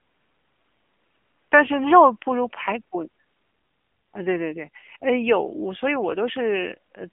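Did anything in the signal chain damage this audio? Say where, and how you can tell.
Yes: the codec stage. Throughout, AMR narrowband mobile coding at about 7.4 kbps squeezes speech into a 150 Hz to 3.4 kHz line band, nothing above 3.5 kHz, with clearly buzzy, synthetic vocal-tract modelling.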